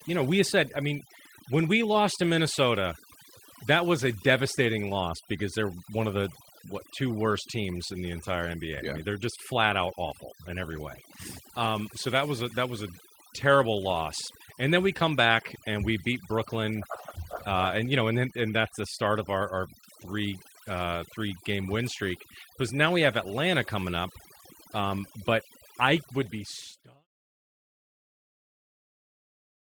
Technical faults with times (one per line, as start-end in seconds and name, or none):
0.00-29.66 overdone noise removal